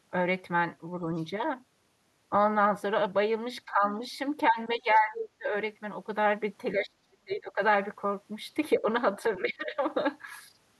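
At 1.16 to 1.24 s, a faint scrap of the other side's voice leaks through, sitting far below the talker, around 35 dB down. It is likely loudspeaker echo that the echo canceller left in the microphone signal. The effect is a brief ghostly trace behind the speech.

From 3.66 s the talker's speech is suppressed in double talk. The level dips by about 10 dB until 3.84 s, then by about 15 dB at 4.50 to 4.58 s. At 4.77 to 5.52 s it falls much deeper, by roughly 30 dB, so the voice nearly vanishes in pieces. The likely cause is the canceller mistaking the talker for echo while both sides spoke, and turning everything down.

Inside that gap, at 5.14 to 5.23 s, the other side leaks through again, louder now, only about 10 dB under the speech. It is a short fragment.

Suppression returns at 6.74 to 7.60 s, again around 30 dB deep. A slight dip follows at 8.79 to 8.86 s. Then comes a drop of about 15 dB at 9.37 to 9.83 s. 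Each time the talker's level dips.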